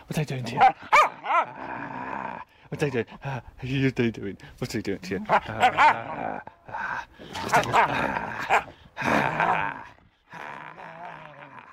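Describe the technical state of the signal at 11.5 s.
At 11.5 s the signal is intact, with no fault to be heard at that moment.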